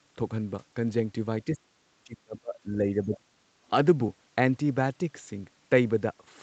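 From 1.45 to 1.84 s and again from 2.04 to 3.33 s, the speech sinks by around 30 to 35 dB, likely speech suppressed in double talk, where the echo canceller couldn't tell the talker from loudspeaker echo. The 8 kHz ceiling from the Opus call path is heard throughout.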